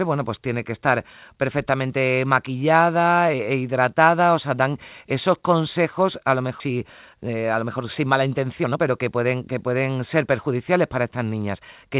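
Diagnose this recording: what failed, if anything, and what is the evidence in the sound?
Skip ahead at 6.60 s, a network and jitter-buffer fault. Right after "esos consejos a lo" the speech jumps forward with no gap or fill, and about a second and a half of speech is simply absent. The two sides are butted together almost directly. That happens when a run of audio is lost in transit or discarded from an overflowing buffer while later packets are already queued, so playback resumes from the newer audio.

Jitter buffer speed-up from 6.70 to 11.17 s, in the call-processing and buffer stage. Once the jump has happened, the speech runs at about 110 % of normal pace, sounding hurried while its pitch stays unchanged. Across the stretch about 0.4 s is trimmed away. The receiver was holding more audio than its target, so it repeatedly cut out short pieces of one or a few pitch periods to pull latency back down. 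The narrowband call path, with nothing above 4 kHz, is audible throughout.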